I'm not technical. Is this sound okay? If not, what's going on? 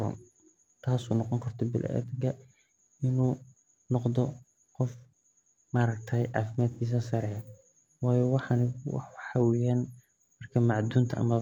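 No. At 6.71 to 6.81 seconds there is a brief AAC frame loss with concealment. About a tenth of a second of sound went missing, which fits two lost frames. The player patched the gap from the sound just before it, so that spot comes out smeared or noisy.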